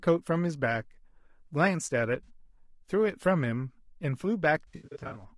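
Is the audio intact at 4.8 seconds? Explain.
No. At 4.8 seconds the sound falls inside a stretch of AAC frame loss with concealment that runs from 4.67 to 5.24 s. Roughly 320 ms of audio is missing, scattered across about 480 ms in gaps of up to about 70 ms. The decoder patches each gap by reusing the last good spectrum, so those moments sound smeared, noisy and phasey rather than cutting to silence. On a spectrogram the harmonic lines blur into flat, repeated smears at each gap, and the waveform envelope looks held or jumps unnaturally.

Underneath that, the speech carries plainly audible low-delay AAC compression throughout, likely AAC-ELD at a rate that points to around 32 kbps. At this low bitrate the voice sounds rough and grainy, with noise filling the spaces between harmonics and a thin, synthetic-sounding top band. On a spectrogram the harmonic lines look fuzzy, with speckled energy between them, and the region above the core band is patchy or coarsely filled.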